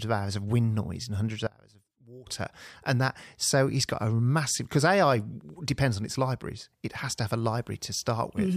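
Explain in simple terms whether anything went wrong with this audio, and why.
One channel inverted, from about 1.47 to 2.27 s: right after "wind noise and hundreds", the speech suddenly drops away to a faint trace, then returns at "and that so he's". The likely cause is that one side of the stereo pair had its polarity flipped, so the two sides were pushing in opposite directions. When they are combined into one, the shared centre sound cancels out, leaving only the small differences between the sides.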